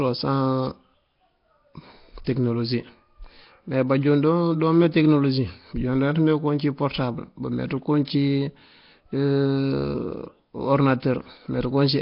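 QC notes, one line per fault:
throughout, Nellymoser compression: likely a low-rate Nellymoser Asao encode; nothing above 5.3 kHz, with heavy rough, hissy noise fill and a smeared, underwater sound.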